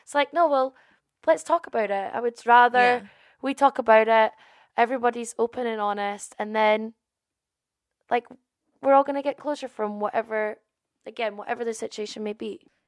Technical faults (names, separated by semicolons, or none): none